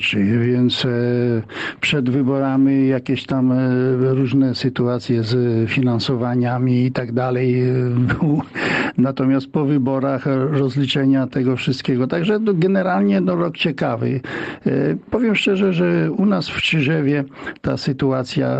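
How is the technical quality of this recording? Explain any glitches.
The recording has one fault, gain pumping, present throughout; the content stops at 8 kHz, consistent with a call path's codec bandwidth.

Gain pumping runs across the whole clip, a swing of roughly 15 dB, likely from excessive input gain driving a fast limiter.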